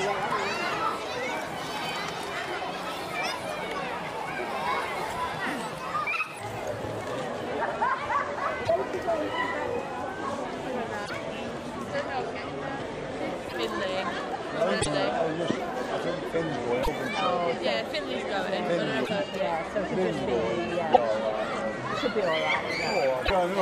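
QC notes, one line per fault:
0.00–6.39 s: section at the wrong speed. The opening runs about 1.24 times too fast, so it sounds hurried and raised by roughly four semitones, with pitch and tempo shifted together. The likely cause is playback or an edit tied to the wrong clock rate. On a spectrogram, harmonics and formant bands sit higher and more widely spaced than after 6.39 s. On the waveform, events are compressed in time, then spacing returns to normal at the boundary.
8.64, 11.05, 13.48, 14.81, 16.82, 19.04, 20.92, 23.25 s: broken MP3 bit reservoir. Each point has a brief disruption of roughly 55 ms where the sound jumps ahead and comes out as a chirp, a burst of noise or a short hole. The timing fits about two 26.1 ms frames being decoded against the wrong data, likely because frames were cut and the following ones borrowed reservoir bytes from elsewhere. A spectrogram shows narrow vertical slabs of broadband or tonal garbage. 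The waveform shows a sudden discontinuity.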